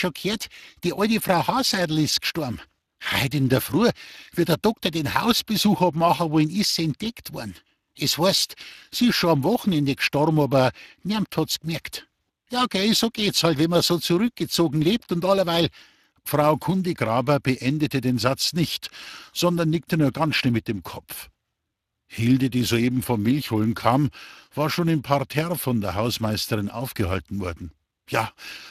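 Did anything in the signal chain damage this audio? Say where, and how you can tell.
Yes, at the codec stage. The speech went through Speex, and the damage is plainly audible from start to finish. The CELP coder approximates the excitation with limited bits, leaving a noisy, hoarse texture. Above 8 kHz only shaped noise fill remains, nothing survives above 15.3 kHz, and the sound points to a bitrate of about 22 kbps.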